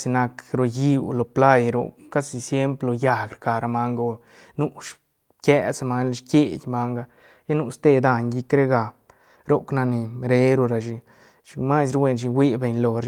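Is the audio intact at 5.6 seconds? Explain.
Yes, the speech is intact at 5.6 seconds, with no dropout, click, distortion or other fault at that point.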